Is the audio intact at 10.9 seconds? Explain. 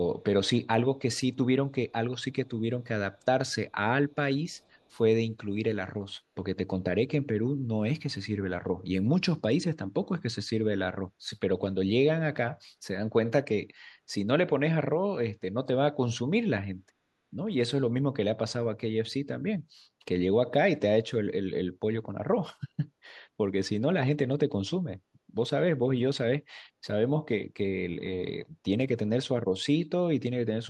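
Yes, the audio is intact at 10.9 seconds, with no dropout, click, distortion or other fault at that point.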